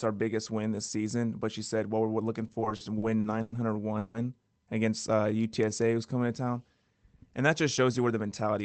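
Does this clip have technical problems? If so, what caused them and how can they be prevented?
Yes, there are four.

Repeated stalls (stutter) from 2.47 to 3.54 s, right after "we're looking": packets kept arriving late, so the jitter buffer ran dry nine times. The receiver stretched the last sound to fill about 270 ms, with the longest gap at 100 ms, so a quarter of that stretch is padding and the audio drags. A steadier network path, or a jitter buffer allowed to hold more headroom, would prevent this.

Call audio freeze from 3.98 to 4.16 s: the sound hangs on for 160 ms without dropping to silence, then picks up where it stopped. The likely cause is a packet hold-up that emptied the buffer and added 160 ms of delay. Fixing the congestion or routing that delays packets would stop it.

Jitter buffer slow-down from 4.89 to 6.19 s, just before "to town": the receiver repeated pitch periods to rebuild its reserve, adding 160 ms. 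Playback runs at 88% speed with unchanged pitch and drawn-out sounds. Keeping arrival timing stable so the buffer doesn't run low avoids this.

Jitter buffer speed-up from 8.12 to 8.59 s, after "just shows you where": the buffer held too much audio, so it trimmed about 50 ms of pitch periods. Playback runs at 108% speed and sounds a little hurried. Smoother packet delivery, without late packets arriving in bursts, prevents the buildup.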